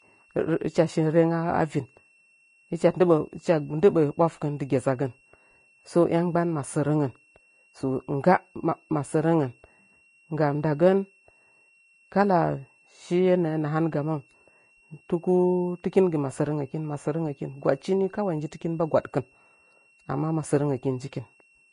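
A thin, high whistle runs through the whole speech clip, sitting roughly 40 dB below the voice and wandering only within a narrow band between 2.69 and 2.75 kHz. This is a switching supply whistle: a switch-mode power supply is cycling at an audible rate, or two such supplies are beating against each other, and that tone leaks into the signal. The small shifts in pitch follow the supply's changing load.

Across the full length, the speech also carries plainly audible codec damage: the treble sounds grainy and hissy, consonant attacks lose their edge, and nothing is present above 10.5 kHz. The likely cause is Vorbis compression at a low setting, which fits a bitrate near 27 kbps. The codec codes a smooth outline of the spectrum plus a residue on top of it, cuts the top band away, and quantises the remaining high detail so coarsely that it turns into noise-like texture.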